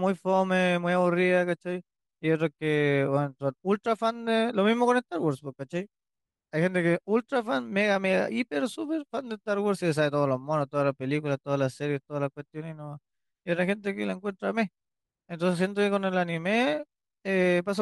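Nothing goes wrong anywhere in this recording; there are no technical faults to point to at any moment.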